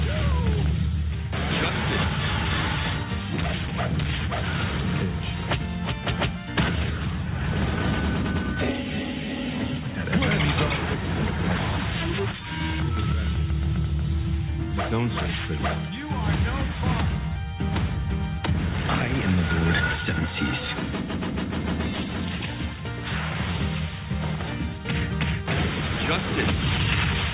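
There are no technical faults to describe in this audio.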